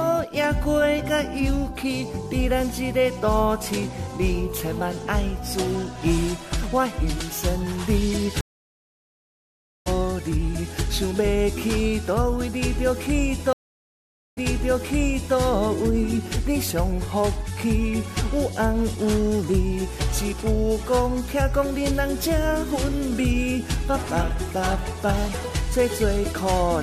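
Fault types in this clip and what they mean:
stream reconnect: at 8.41 s and 13.53 s the link breaks and decoding restarts mid-stream; 1.45 s of silence skips about a second ahead, 0.84 s replays 1.0 s.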